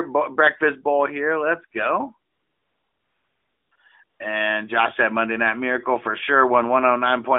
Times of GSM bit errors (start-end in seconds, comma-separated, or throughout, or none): none